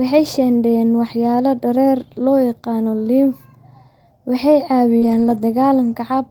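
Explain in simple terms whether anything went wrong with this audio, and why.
Short concealed packet loss, from 4.97 to 5.04 s: about 40 ms of the call's speech never arrived in time, so the receiving end covered the hole by carrying on the last bit of sound it had. It kept the pitch going for voiced sound and used shaped noise for anything breathy, then blended back into the real speech. That patch shows up as a quick smear or wobble, and a short consonant there can disappear.

Lost packet rebuilt from error correction, from 5.02 to 5.40 s: several separate packets went missing right after that, but each following packet carried a small, lower-quality backup copy of the one before it. The decoder played those backups, about 200 ms in total, so there is no gap. The speech in that stretch sounds rougher and noisier than the speech around it.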